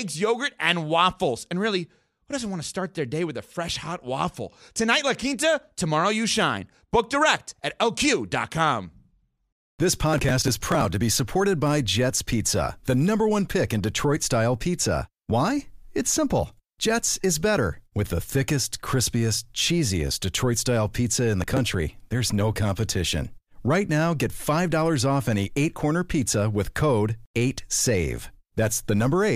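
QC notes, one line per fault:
10.14–10.85 s and 21.42–21.58 s, processor overload crackle: the processor repeatedly missed buffer deadlines, about twenty and about ten times, in blocks that fit short buffers of roughly 5 ms, and each missed block was skipped. The many tiny gaps with hard edges produce gritty crackle just before "to be supported by" and between "style pizza in" and "there's no competition".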